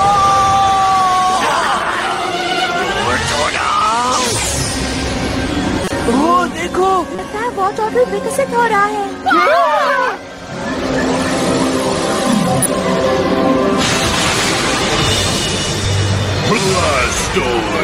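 At 5.84 s, 7.15 s, 12.62 s and 15.82 s brief chirps and noise blips break through, each lasting about 35 to 70 ms, the longest at 5.84 s. These are corrupt frames decoded: damaged bits in one or two compressed frames were read as wrong gains and codes, throwing energy to the wrong frequencies. Unlike a lost frame, which leaves a gap or a smeared repeat, each event adds a foreign chirp or blip.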